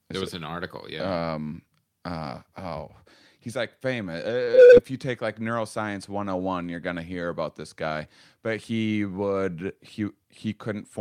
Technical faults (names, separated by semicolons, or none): short stall from a late packet; short concealed packet loss; jitter buffer speed-up